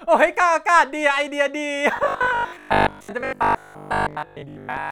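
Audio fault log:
1.97–4.91 s, robotic sound from repeated short buffers: from here to the end the speech turns into a stiff, metallic drone pinned at about 50 Hz, still loosely tracking the talking. That's most likely the playback starving for data and looping a 20 ms slice over and over for most of the stretch while the real audio gets skipped, so the repeat rate itself becomes the buzz you hear.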